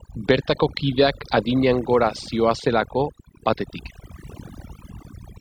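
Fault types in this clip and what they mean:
Overdone noise removal, heard across the whole clip: a noise reduction stage was pushed far too hard, so any frequency band sitting close to what it judged to be background noise gets cut almost to nothing. Between phrases the floor drops to an unnatural hush scattered with chirping, glittery fragments, and the softer parts of the speech are stripped away with the noise.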